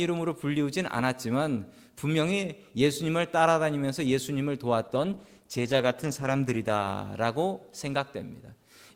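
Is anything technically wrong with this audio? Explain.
Yes. An adaptive stream at a lower bitrate plays from 4.88 s to 6.88 s, a two-second stretch of the speech. The player switched to a cheaper encoding of the same audio when the connection slowed, then switched back. The change is abrupt in both directions with no gap. Inside that window codec artefacts rise, which fits a step down from roughly 64 to 16 kbit/s Opus.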